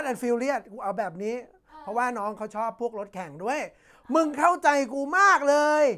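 Nothing stood out on listening to the speech in the clip.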